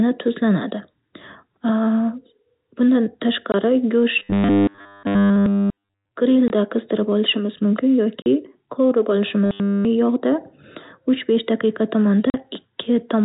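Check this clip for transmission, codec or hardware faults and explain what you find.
Two faults are present in this speech clip: packet loss filled with silence, and a robotic sound from repeated short buffers. The narrowband G.711 telephone character, with nothing above 4 kHz, belongs to the transmission format rather than to either fault.

Packet loss filled with silence occurs four times: 3.52–3.54 s, 6.48–6.50 s, 8.22–8.26 s and 12.30–12.34 s. The first two gaps last 20 ms, which fits one lost 20 ms packet each. The last two last 40 ms, which points to two consecutive packets. The receiver inserted digital silence in place of the missing audio, so each gap begins and ends abruptly.

A robotic sound from repeated short buffers appears from 4.19 to 6.09 s and again from 9.46 to 9.85 s. Through both stretches the speech becomes a rigid, metallic buzz at 100 Hz. The phrasing is still roughly recognisable. 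The likely cause is audio arriving too slowly, so the playback side repeated a 10 ms buffer over and over. Almost none of the real signal came through in those stretches.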